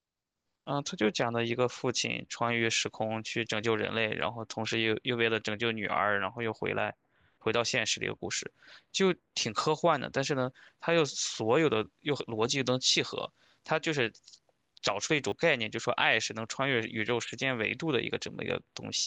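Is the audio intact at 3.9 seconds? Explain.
Yes, at 3.9 seconds the speech plays through cleanly, with no dropout, click, distortion or other fault.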